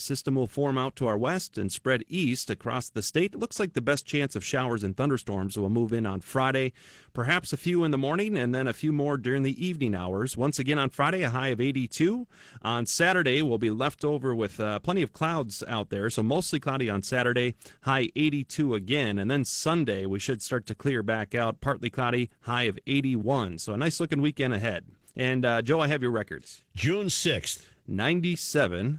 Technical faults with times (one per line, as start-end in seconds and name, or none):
0.00-28.98 Opus voice compression